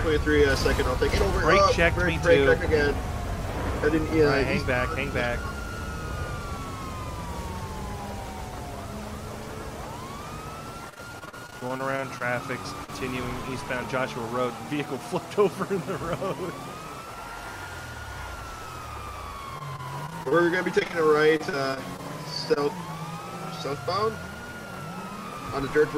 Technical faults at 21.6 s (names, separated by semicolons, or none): repeated packet loss (robotic sound)